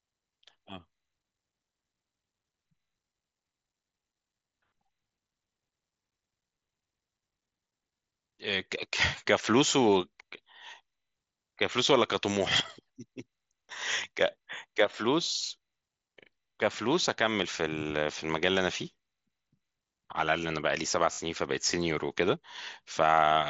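Concealed Bluetooth headset packet loss occurs at 9.16 s, nearly hidden, and from 21.12 to 21.18 s as a buzzy, steady-level patch. Copied waveform cycles show as repeated periods and flat horizontal spectrogram bands.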